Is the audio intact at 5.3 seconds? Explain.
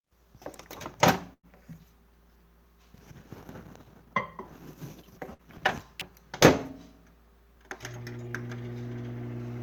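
No. A burst of packet loss runs from 5.33 to 5.42 s: the receiver stretched the last sound for about 55 ms, fading it into a held buzz or hiss, then resumed with roughly 60 ms missing. Unlike a plain dropout, the gap isn't silent.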